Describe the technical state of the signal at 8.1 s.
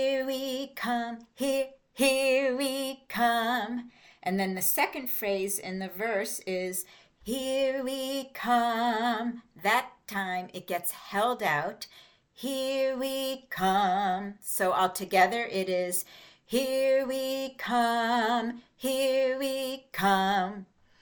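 At 8.1 s the signal is intact, with no fault to be heard at that moment.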